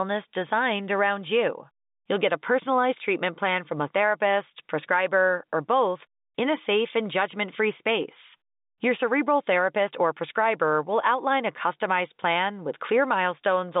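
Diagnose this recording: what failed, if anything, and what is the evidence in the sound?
Nothing stood out on listening; the speech comes through as ordinary telephone-band audio, with nothing heard above about 3.8 kHz, as the working G.711 telephone coding would give.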